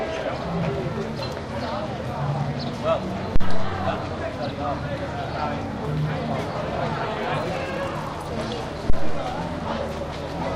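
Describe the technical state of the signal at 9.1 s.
At 9.1 s the signal is inside a deep, low thump that hits at 8.90 s, dies away with a decay time of about 92 ms, and has cleared by 9.31 s. This is a phantom power thump. Phantom power or another supply voltage was switched on or off while the input was live, and that sudden DC step passed through the coupling capacitors as a single low-frequency pulse. It peaks at about -6 dBFS.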